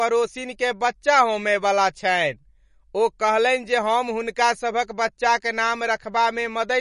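Speech throughout the clip sounds plainly watery and swirly, with nothing above 10.6 kHz. This is likely MP3 compression at a bitrate that fits about 40 kbps: starved of bits, the encoder drops weak frequency lines that flicker between frames and removes the treble.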